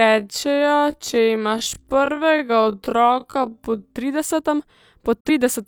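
From 0.0 to 3.96 s, software likely slowed the speech to about half speed while holding pitch, producing a time-stretched section that drags until "tridesetem po". At 5.20 to 5.30 s, just after "tridesetem po", a digital broadcast dropout mutes the receiver after a 3 ms fade, losing about 43 ms of audio, which fits a single failed frame.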